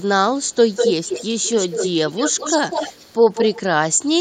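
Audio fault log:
0.45–0.55 s and 0.75–3.62 s, echo leak: a faint delayed copy of the speech trails by 240 ms, then a much stronger one, nearly as loud, trails by 198 ms, likely because a far-end echo canceller let its loudspeaker pickup through.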